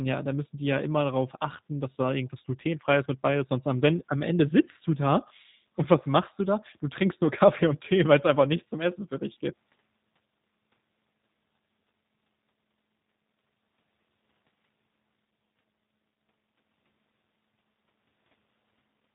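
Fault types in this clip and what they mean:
G.729 codec: The speech sounds plainly rough and slightly synthetic, and nothing above 3.8 kHz gets through, which fits a low-rate VoIP codec near 8 kbit/s that rebuilds each 10 ms frame from a vocal tract filter, a pitch predictor and sparse pulses.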